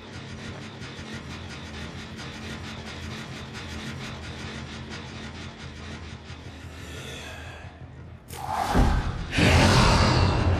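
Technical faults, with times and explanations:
Throughout, channel delay (comb filtering): the sound is rough and slightly doubled. One channel arrives roughly 20 ms after the other, so the mono sum cancels shared content at evenly spaced notches beginning near 20 Hz.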